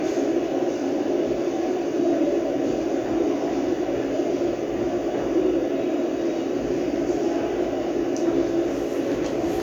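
Nothing stood out on listening to these everyday sounds; no technical problem could be heard at any point.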